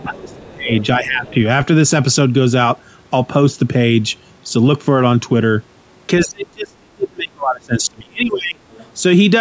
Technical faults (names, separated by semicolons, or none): speech suppressed in double talk; other side's voice leaking through